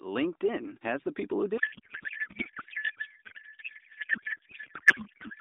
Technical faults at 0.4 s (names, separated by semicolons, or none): none